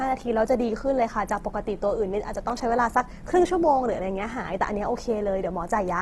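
Speech, band-limited with nothing above 12.1 kHz and carrying plainly audible grainy, rough texture where the codec fills bands with noise rather than leaving holes. That sound is likely Opus compression in its CELT music mode, at a rate that fits roughly 16 kbps. At 2.50 s a block of digital silence drops the signal out for about 1.6 ms with no fade, so it is heard as a tick or dip rather than an audible gap.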